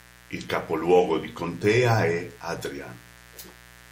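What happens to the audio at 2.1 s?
At 2.1 s the speech sits over mains buzz running through the whole clip: sharp 60 Hz switching spikes stack harmonics into kilohertz, giving a raspy buzz about 25 dB down, not a smooth hum.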